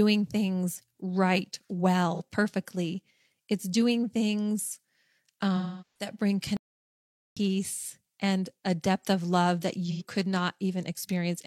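At 2.14 s, just after "things right", the speech smears into a brief noisy, phasey patch of about 43 ms. This is AAC frame loss with concealment: a frame went missing, and the decoder rebuilt the gap from the last good spectrum with randomised signs, which fits a single lost frame. From 5.56 to 6.09 s a longer loss of 384 ms decays towards silence and fades back in, pointing to a run of roughly nine frames.

A playback stall follows from 6.57 to 7.37 s. The audio stops mid-flow for about 0.8 s and then resumes, most likely because the player's buffer ran dry or its thread was blocked.

At 9.91 s, right after "depth of love that", a further AAC frame loss with concealment leaves a smeared patch of about 85 ms, consistent with two consecutive frames filled in from the preceding spectrum.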